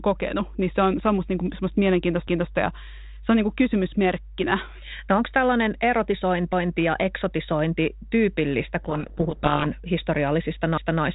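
A steady mains hum at 50 Hz runs under the whole clip. It sits roughly 15 dB below the speech. The power line is leaking into the signal, most likely through a ground loop or a nearby transformer. Its level never changes, and it has the dull, buzzing low tone of a supply fault.

At 2.28 s, right after "musta niin kuin semmoista", the first overlapping chunks fault appears. A 250 ms stretch plays twice before "ja se on niin", ending at 2.53 s. The audio was handled in 4 s chunks, and each new chunk began a quarter second before the last one ended. That is why the stutter recurs at 6.53 s, just before "ja eksotisointi tyypillistä", and again at 10.78 s. Each time, a short stretch doubles with a small jolt at the join.

From 8.84 s to 9.71 s, just after "ja eksotisointi tyypillistä", a codec payload misread takes over. The speech sinks under harsh, grinding distortion. The decoder is reading G.726 code words with their bits in the wrong order. 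The frames still decode, but the sample differences come out wrong. The light, band-limited telephone character elsewhere fits 32 kbit/s G.726 working as intended. When the bit order agrees again at 9.71 s, the distortion stops at once.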